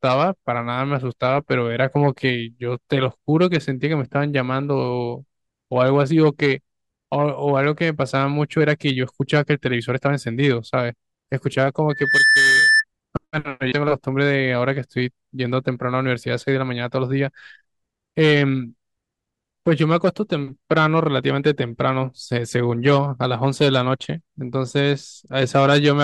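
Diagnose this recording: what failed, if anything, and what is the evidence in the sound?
Loudspeaker feedback squeal in the analogue acoustic path between loudspeaker and microphone. From 11.89 to 12.84 s a single 1.8 kHz tone swells over roughly a third of a second to about 5 dB above the speech. At 1.8 kHz the mic-to-speaker loop gain exceeded one, so that frequency recirculated and grew.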